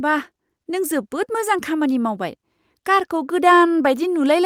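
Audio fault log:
1.79 s, lost packet rebuilt from error correction: a brief rough, noisy patch of speech about 20 ms long, with no gap or dropout. The sound fits a single lost packet whose content was recovered from a low-bitrate redundant copy carried in the following packet, as Opus in-band forward error correction does. Because that backup copy is coarser than the original frame, the rebuilt stretch sounds grainier than the speech around it, but the speech continues without a break.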